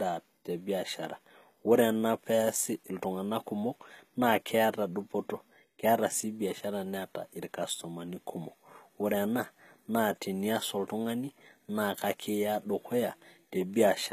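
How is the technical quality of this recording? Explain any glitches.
The recording has audible compression damage throughout. HE-AAC compression is likely: the treble up to 14.9 kHz is rebuilt from copied lower bands, so sibilants sound gritty and lispy, pointing to about 20 kbps, unlike a plain lowpass.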